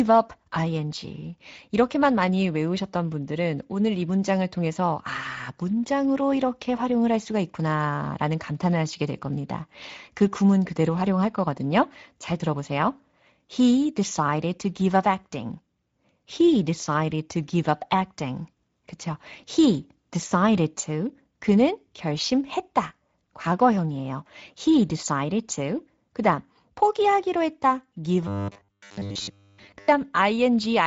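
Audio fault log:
throughout Speex codec: plainly audible hoarse, noisy CELP coding, which fits Speex at about 16.8 kbps; the spectrogram looks smeared and shows nothing above 7.7 kHz.
28.27–29.88 s robotic sound from repeated short buffers: after "다음 포기하기로 했다 give", a rigid metallic 100 Hz buzz, likely from repeating 10 ms chunks; the spectrogram shows even harmonic stripes.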